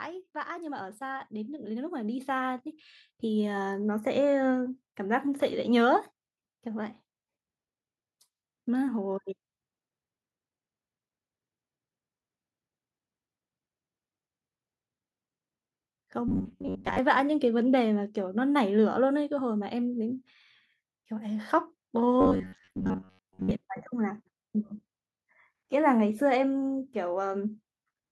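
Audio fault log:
0.47–9.27 s, automatic gain rising: the gain control judged the input too quiet and raised its level slowly, by about 11 dB, so speech and background noise swell together. On a waveform the envelope widens steadily across those nine seconds, and the spectrogram's noise floor brightens along with the speech.
16.28–16.99 s and 22.21–23.52 s, robotic sound from repeated short buffers: the speech turns into a stiff, metallic buzz pitched at 93.8 Hz that still loosely tracks the syllables. The likely cause is a segment of about 10.7 ms being replayed in place of late audio, covering roughly half of the first stretch and most of the second. A spectrogram shows evenly spaced horizontal harmonic lines, and the waveform shows a repeating, identical cycle.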